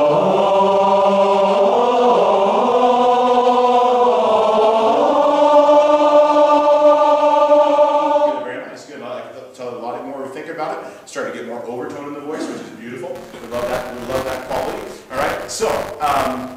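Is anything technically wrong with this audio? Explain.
Yes. From 13.15 s to the end there is buffer tearing: the writer and the playback hardware have slipped and cross inside each period, so a small slice of every buffer holds audio about 20 ms old. Its hard joins produce a robotic 200 Hz buzz wherever sound is present.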